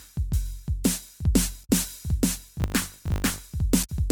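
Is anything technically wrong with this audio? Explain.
Yes, there are two kinds of fault in this music.

Damaged data in a compressed stream shows up twice, from 1.61 to 1.70 s and again from 3.80 to 3.90 s. Part of the compressed stream is corrupted there, so the decoder misreads those frames and loses sync until it finds the next frame header. You hear it as a brief glitch cutting across the music each time.

From 2.58 to 3.40 s there's a filter restarted on every block. The filter throws away its state at each block boundary and starts again from silence, so each block opens with a little transient. Those repeat at 50 Hz, which points to 20 ms blocks, and they add up to a buzz that rises and falls with the music's level.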